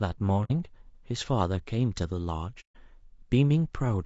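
Speech, likely coded with low-delay AAC compression (AAC-ELD) at a rate consistent with about 32 kbps; its short frames blur the harmonics, leaving the voice rough and grainy throughout. AAC frame loss with muting: missing frames were zeroed, so the sound fades into soft-edged silent holes at 0.44–0.52 s and 2.60–2.77 s, consistent with roughly two and five lost frames.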